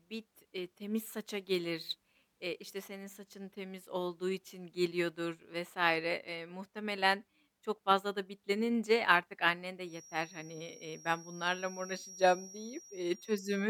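A speech recording in which the loudspeaker-to-microphone loop is likely sitting right at the edge of feedback, holding a single frequency near 5.7 kHz in a stable ring. From 9.82 s, just after "bitlenince artık annen de", a thin feedback whistle runs to the end, about 20 dB under the speech and swelling and fading slowly in level.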